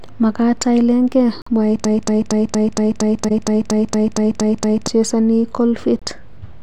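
At 1.42 s the speech drops into a corrupt frame muted gap that runs to 1.48 s. The decoder rejected damaged compressed frames and silence replaced them. The 64 ms hole, about three frames' worth, opens abruptly, and timing carries on afterwards rather than stuttering.

From 1.85 to 4.88 s a broken-record loop takes over. A 232 ms fragment repeats exactly, back to back, 13 times, likely because the stream stalled and the last held fragment kept being resent. Unlike a muted gap, the missing audio is covered by identical repeats, not silence.

Inside that loop, at 3.28 to 3.31 s, a corrupt frame decoded burst appears. Roughly two damaged frames were played anyway, putting energy at wrong frequencies. The result is a 30 ms glitch peaking at about -10 dBFS, a sound added where a muted frame would leave a hole.

A second corrupt frame muted gap, 36 ms long, cuts the sound from 5.99 to 6.03 s.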